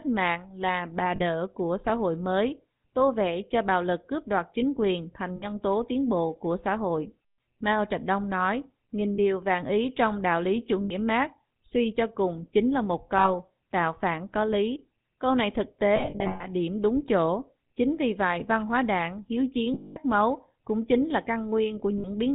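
Speech, coded throughout with the GSM full-rate codec. The damage is plainly audible. Nothing comes through above 4 kHz. The voice has a buzzy, gravelly roughness. That comes from the codec rebuilding the voice from a vocal-tract model driven by sparse, regular pulses. The sound fits the 13 kbps GSM full-rate codec. There are also lost GSM frames at eight points: 1.16, 5.36, 9.14, 10.84, 13.18, 15.96, 19.74 and 21.98 s. Most gaps last 40 or 60 ms. At each one, the decoder repeats the last good frame, so the sound hangs as a metallic ring. At 15.96 s, about 320 ms is lost, scattered over roughly 0.44 s, with the longest run near 0.1 s. The loss at 19.74 s runs 220 ms.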